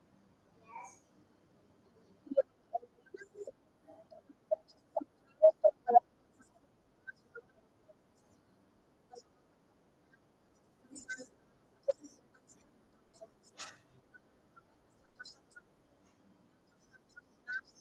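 Short concealed packet loss strikes at 0.49–0.53 s, 13.07–13.15 s and 15.05–15.17 s. Audio arrived too late, so the decoder stretched the preceding sound and crossfaded back, giving brief smears. On a spectrogram, harmonics run unnaturally flat, then blur into the resumed signal.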